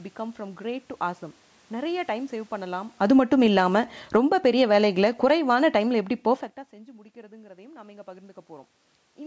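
From 2.88 s to 4.36 s the automatic gain control falls, pulling the level down by about 14 dB over roughly one and a half seconds. It judged the input too loud or its background noise too strong and lowered its gain gradually, so the speech and the room noise sink together.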